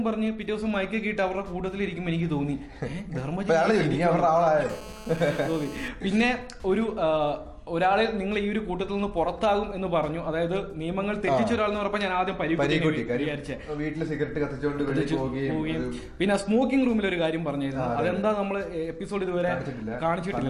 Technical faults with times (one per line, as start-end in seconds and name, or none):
4.69-5.88 GSM phone buzz